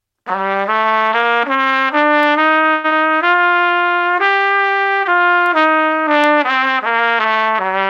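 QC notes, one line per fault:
2.23 s, 5.46 s and 6.24 s: bit error spikes. Each is one sharp, broadband tick with no relation to the sound around it. A flipped bit throws a single sample at 2.23 s, and three samples at the other two, far off its true value for an instant.
2.73 to 2.93 s: long network dropout. The sound turns into a buzzy, fading continuation of itself for about 0.18 s, with no silence. It then resumes with about 0.1 s skipped. The likely cause is a stretch of lost packets that the receiver covered over.
3.25 to 3.75 s: jitter buffer slow-down. The audio drags at 83% speed but keeps its pitch, with smeared, drawn-out sounds. The receiver repeated short stretches of waveform, adding 91 ms, to rebuild its buffer.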